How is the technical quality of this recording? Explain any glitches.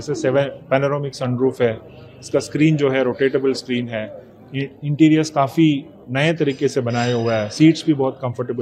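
Nothing here to flag: the recording runs smoothly all the way through, with no glitches of any kind to explain.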